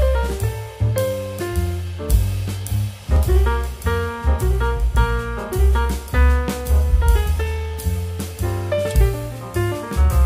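At 3.16 s the sound jumps forward with no gap. This is likely a dropped buffer (overrun). Samples were overwritten before being read, so a few milliseconds vanished and the two sides were spliced directly together.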